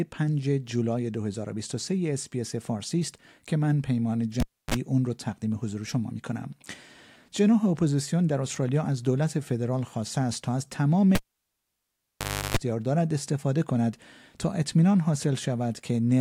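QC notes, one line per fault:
4.40–4.74 s and 11.15–12.57 s, cable pulled and plugged in: a live lead is yanked and reseated. Each event opens with a pop as the contact breaks, then near silence (294 ms, then 1.37 s), then a 50 Hz mains buzz while only the plug tip touches (38 ms, then 339 ms), and a second pop as the signal returns. On a waveform, two spikes bracket a flat gap. A spectrogram shows broadband vertical lines at each pop and stacked 50 Hz harmonics during the buzz.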